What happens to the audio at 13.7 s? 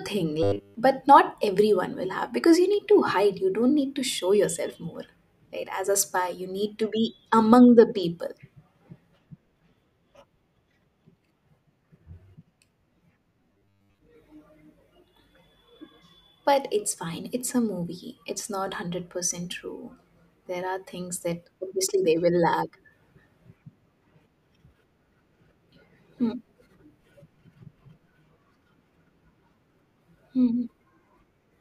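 From 13.53 to 14.00 s the speech turns into a rigid, metallic buzz with a fixed pitch at 100 Hz, while the rough shape of the words still comes through. This is robotic sound from repeated short buffers, likely caused by audio arriving too seldom so that playback keeps repeating the last fragment instead of moving forward. A 100 Hz buzz fits a repeated chunk about 10 ms long, and most of that half-second is filled with repeats rather than new audio.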